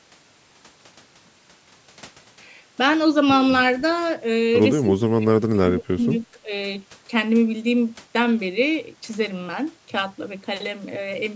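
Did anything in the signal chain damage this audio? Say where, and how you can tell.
Yes. The damage is in the call processing. From 4.82 to 6.08 s the speech sinks and breaks up in chunks, dropping by as much as about 30 dB. Then there's a shorter, shallower dip of about 15 dB from 6.32 to 6.51 s. That pattern of level being pulled down in pieces is likely speech suppressed in double talk: the echo canceller couldn't tell this talker from loudspeaker echo while the far end was also talking, so it ducked both.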